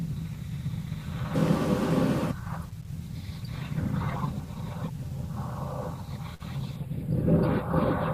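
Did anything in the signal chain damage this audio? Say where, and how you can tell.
Yes. From 6.76 s to the end, the speech turns thin and hollow at the top, losing air around 7 kHz. That's channel delay (comb filtering) at the mono fold-down: one channel lags by a few samples, about 0.07 ms, and summing cancels evenly spaced frequencies.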